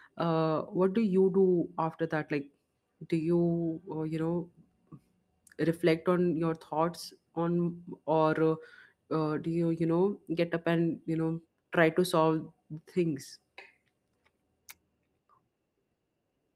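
No technical faults can be heard anywhere in this speech.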